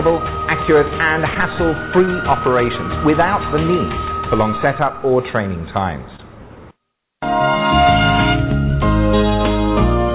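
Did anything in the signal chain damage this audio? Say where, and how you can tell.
Yes. Network stage: short concealed packet loss at 1.34, 2.05, 4.51 and 6.16 s. Each 20 ms gap was patched by continuing prior sound, leaving brief smears.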